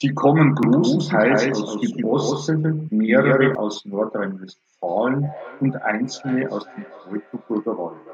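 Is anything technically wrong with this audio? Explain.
Yes, two things. From 0.63 to 3.55 s there's a doubled audio track: a second full-band copy trails roughly 150 ms behind, a few dB quieter, likely from a slower capture path. From 4.86 s to the end, there's feedback echo between two devices: another device replays this mic, which picks it up again, so the speech returns roughly every 400 ms, thinner and ringier, peaking about 20 dB down.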